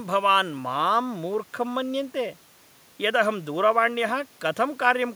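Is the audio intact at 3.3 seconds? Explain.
Yes, the speech is intact at 3.3 seconds, with only the room's own background noise, about 35 dB below the speech, present beneath it.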